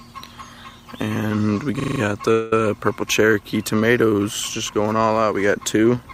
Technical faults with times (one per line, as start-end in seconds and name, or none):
1.80-2.00 system hang loop
2.31-2.53 call audio freeze